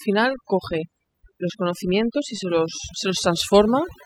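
A speech recording with overdone noise removal from start to end. The noise reduction was set too strong. It cuts any frequency band near its noise estimate. The background drops and breaks up into twinkling specks. Quiet parts of the voice vanish too.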